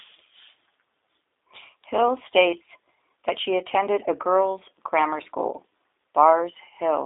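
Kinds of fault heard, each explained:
G.729 codec: The speech has passed through a low-rate VoIP codec that rebuilds it from a vocal tract model, a pitch predictor and a few pulses per frame. The damage is plainly audible as a rough, slightly synthetic edge. Nothing is heard above about 3.8 kHz, and the band sounds like a 300 Hz to 3.7 kHz telephone line.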